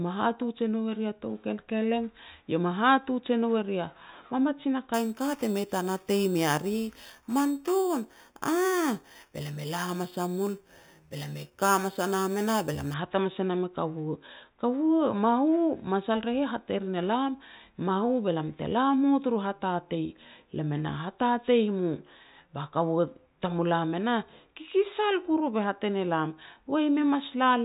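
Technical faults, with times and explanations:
4.94–12.94 s, imaging from sample-and-hold upsampling: between "eri a mamajin a" and "hat hamas e nam" the speech gains a bright metallic fizz about 16 dB below the voice, swelling and fading with it. Each sample was simply repeated to raise the rate, which fits a step from 8 kHz to 48 kHz with no smoothing filter. Mirror copies of the spectrum are left behind, the lowest filling 4 kHz to 8 kHz and moving opposite to the pitch.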